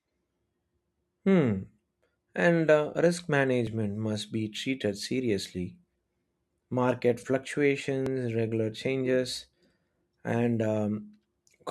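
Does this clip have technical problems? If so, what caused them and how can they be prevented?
Yes. Three brief skips break the speech, each a small jump where a sliver of sound is skipped rather than silenced: at 3.67 s, between "uh risk" and "must be treated"; at 5.06 s, just after "must be treated"; and at 8.06 s, just before "regular changes". Each gap is only around 20 ms. These are likely dropped buffers (overrun), where recording software fell behind and the hardware overwrote unread audio. Larger capture buffers and a less loaded system during recording would prevent it.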